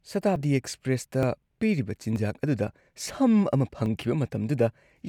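At 0.36, 1.23, 2.16 and 3.86 s the speech jumps forward, losing around 10 ms each time (nearer 20 ms at 1.23 s), likely a dropped buffer (overrun). No gap of silence is inserted, which separates it from an underrun.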